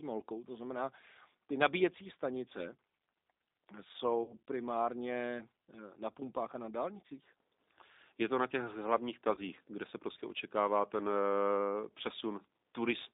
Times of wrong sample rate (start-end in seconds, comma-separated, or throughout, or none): none